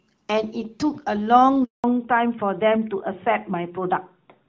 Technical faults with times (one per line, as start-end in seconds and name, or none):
1.64-1.84 handover gap
1.84-4.48 fallback to narrowband